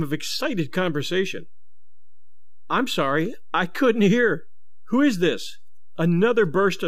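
From start to finish the speech waveform carries a DC offset: the entire signal sits displaced from zero by a fixed amount, measuring about -31 dBFS. A constant shift like this has no audible pitch of its own, so nothing in the speech reveals it by ear. It shows up as steady energy at 0 Hz and eats into headroom on one side of the waveform, bringing that polarity closer to clipping.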